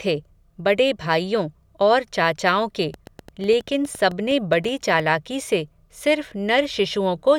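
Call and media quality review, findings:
Train of clicks, 2.94 to 5.01 s: about fifteen similar ticks at roughly 7.8 per second, unevenly spaced, peaking near the level of the speech and audible in gaps too. Waveform shows narrow spikes standing out from the speech envelope. Spectrogram shows thin full-height vertical lines at irregular intervals. Likely cause is electrical interference from nearby equipment or an interface repeatedly injecting a pulse.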